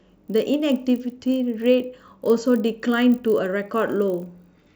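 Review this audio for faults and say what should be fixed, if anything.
A resampler restarted on every block runs through the whole speech clip. Each 20 ms block was converted from 24 kHz to 48 kHz on its own, leaving an error at every edge, heard as a 50 Hz buzz. Unlike mains hum, it disappears in pauses and follows the signal. To prevent it, run one continuous resampler across the stream and carry its filter state from block to block.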